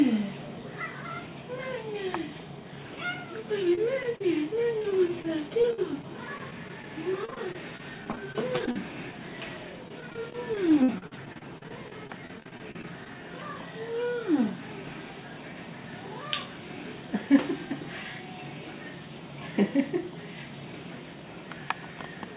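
At 3.75, 4.03 and 4.16 s, short concealed packet loss patches gaps of about 20, 10 and 40 ms by extending the preceding sound. Each is a brief smear or wobble, seen as a smoothed, repetitive patch in the spectrogram.

Repeated packet loss (robotic sound) follows over 4.78–5.25, 5.62–6.84, 7.25–8.76 and 9.88–13.07 s. Repeated holes of up to about 50 ms are each filled by concealment, making choppy audio. On the waveform and spectrogram these stretches show regularly repeating, flattened segments. Throughout, the call path cuts everything above 4 kHz, which fits G.711 A-law.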